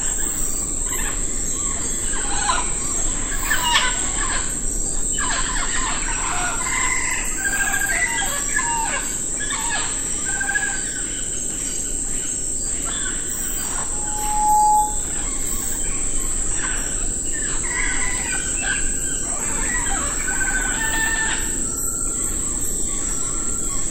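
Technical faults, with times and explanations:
11.51 s and 23.49 s, audio missing between chunks: The system likely processes audio in 6-second blocks and drops a tiny slice, roughly 7 ms, at each handover. The two edges are butted together without a gap, so the sound jumps abruptly at these moments.
13.92 to 15.05 s, loudspeaker feedback squeal: A microphone is picking up the loudspeaker it drives, and at 846 Hz the loop gain exceeds unity. That tone feeds on itself, swelling over roughly 0.7 s into a steady squeal about 5 dB above the sound.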